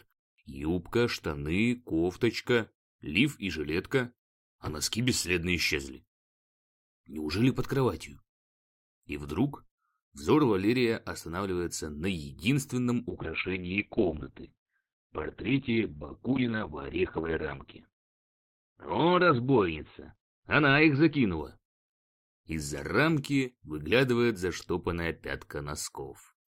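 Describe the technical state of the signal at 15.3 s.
At 15.3 s the signal is inside a call bitrate drop (13.11 to 23.45 s). The encoder starves, consistent with roughly 6 kbps, and the band is cut off at 4 kHz, so the sound is muffled and coarse.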